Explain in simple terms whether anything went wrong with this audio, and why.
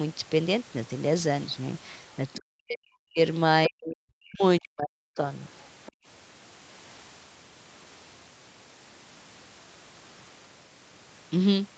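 Yes, a few things went wrong, all around the middle of the clip.

First, there's speech suppressed in double talk, three times: 2.37 to 3.19 s, 3.67 to 4.43 s, and 4.59 to 5.2 s. In each stretch the voice sinks way down, nearly to nothing at its worst, for about half a second or more. The likely cause is both people talking at once. The echo canceller couldn't tell this talker apart from the other side's voice coming out of the loudspeaker, so it turned everything down together.

Right after that, from 5.86 to 5.92 s, there's a brief bit of the other side's voice leaking through. It's a faint scrap, well below the main talker, only a few hundredths of a second long. This likely happened because the device was playing the far end on its speaker and the echo canceller didn't scrub all of it out of the microphone signal, so a sliver slipped into the recording.

Then comes background gated by the echo canceller, from 5.92 to 6.06 s. 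The room sound suddenly drops out almost completely for a moment, about a seventh of a second, and then comes back. That happens because the canceller clamped the microphone down hard while the loudspeaker was active and let go again once it was safe.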